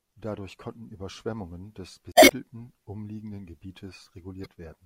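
At 2.11 to 2.32 s, and again at 4.43 to 4.46 s, the speech breaks into a brief garbled burst. Both are damaged data in a compressed stream. Corrupted frames get misdecoded, and the decoder loses sync until it finds the next valid frame.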